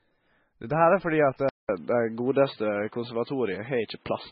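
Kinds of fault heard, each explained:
MP3 compression: The encoder likely ran out of bits, which fits a very low bitrate of about 16 kbps. It discarded weak frequency detail and cut the treble outright. Nothing above 5.6 kHz is left, so the speech loses its top end. The damage is heavy throughout: the sound has a watery, swirly quality as faint components flicker in and out from frame to frame, and the onsets of sounds are smeared rather than crisp.
Input switched to a poorer device: At 1.49 s the recording likely moved to a lesser input, such as another microphone or a headset's call mode, and stays there to the end. A gap of about 200 ms of silence marks the switch. Afterwards the band narrows further, with nothing above 4.6 kHz. The level shifts by around 5 dB, and a new background noise appears roughly 40 dB below the speech.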